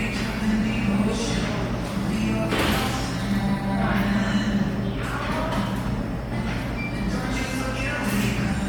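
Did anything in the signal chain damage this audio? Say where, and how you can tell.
Yes, at the codec stage, throughout the sound: plainly audible Bluetooth LC3 compression, likely from an LE Audio link near 48 kbps. Coarsely quantised, noise-filled upper bands in 10 ms frames add a grainy, breathy edge, seen on a spectrogram as blocky speckle reaching about 20.2 kHz.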